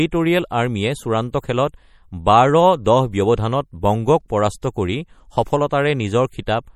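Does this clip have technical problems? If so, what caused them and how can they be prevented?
Yes. Throughout the speech, plainly audible MP3 compression gives a watery, swirling texture and smeared attacks, as weak frequency lines flicker on and off between frames; nothing survives above 18.5 kHz. This most likely comes from a starved encoder, fitting roughly 48 kbps. Unlike a plain low-pass filter, the warbling sits inside the audible band. Encoding at a higher bitrate or keeping a lossless copy would prevent it.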